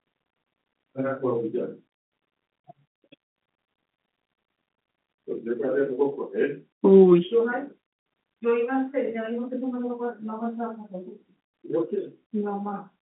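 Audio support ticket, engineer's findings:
No faults found in the speech audio. The G.711 telephone coding path is working as expected, with the line band spanning 150 Hz to 3.6 kHz and nothing present above 3.8 kHz.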